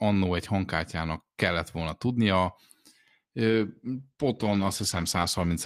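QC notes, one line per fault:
3.51–5.65 s, call bitrate drop: the speech turns rough and watery and loses its top end, staying degraded to the end of the clip. The encoder's bitrate fell from 48 to 14 kbps, coding more coarsely and trimming high frequencies, without recovering.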